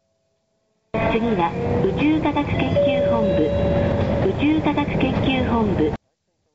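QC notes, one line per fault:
No faults: the audio comes through a call path whose content stops at 8 kHz, which fits a wideband codec such as G.722.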